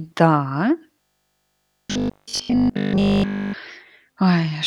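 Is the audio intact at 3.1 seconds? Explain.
No. From 0.94 to 3.56 s, the playback likely ran short of fresh audio and kept looping its last short buffer, skipping nearly all the real speech. This robotic sound from repeated short buffers imposes a rigid 50 Hz metallic buzz, which fits a 20 ms buffer.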